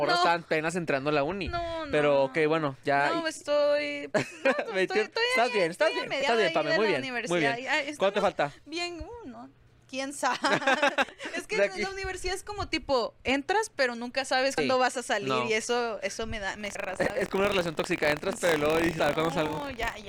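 Damaged data in the compressed stream makes the decoder lose sync, leaving short disruptions in the audio at 6.19–6.23 s and at 11.09, 14.58, 16.75 and 18.99 s. From 16.59 s to the end, buffer tearing lets writer and reader overlap, so a small slice of each buffer carries audio from about 50 ms earlier, producing a 43.1 Hz buzz that fits a 1024-sample buffer.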